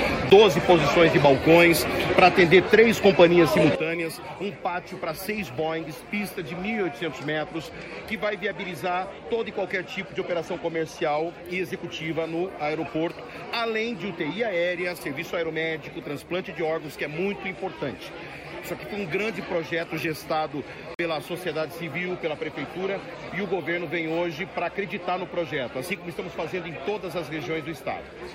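A tick at 0.30 s, where the sound drops out for about 12 ms, is a block of digital silence. The signal falls straight to silence and returns with no fade. A longer hole of about 46 ms runs from 20.94 to 20.99 s and is heard as a short gap. These lengths fit one missed 512-sample buffer and one missed 2048-sample buffer: the program didn't deliver samples in time, and zeros went out instead. At 3.75 s the level drops abruptly by about 12 dB and stays down until the end of the clip. The background noise falls by the same amount at the same instant, which marks it as a sudden gain jump in the digital chain rather than a change in the source. The likely cause is a gain setting applied in a single step with no ramp. From 7.38 to 11.31 s the treble turns dull and a gritty, grainy noise rises under the sound, then clears. This is a Bluetooth SBC bit pool drop. The sound points to the phone lowering the bit pool from 31 to 15 on a congested link, down to about 105 kbps. 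The top sub-bands were starved of bits and the rest were quantised coarsely until the rate recovered.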